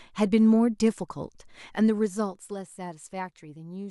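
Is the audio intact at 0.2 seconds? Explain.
Yes, the speech at 0.2 s is intact, with no fault present at that moment.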